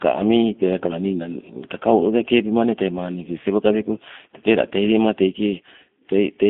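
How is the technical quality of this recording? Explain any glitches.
The recording has audible technical damage from one fault. G.729 codec coding affects the whole clip. The speech is squeezed into a narrow telephone band of roughly 200 Hz to 3.6 kHz and rebuilt from a compact model of the vocal tract, a pitch predictor and a few pulses per short frame, which fits an 8 kbit/s stream. The result is muffled, slightly rough and synthetic, with plainly audible coding artefacts.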